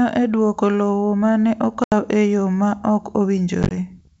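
A speech clip on a G.722 wideband call shows packet loss on an ADPCM call. Silent gaps hit at 1.84–1.93 s and 3.63–3.73 s. The mismatched decoder then returns slightly distorted before settling.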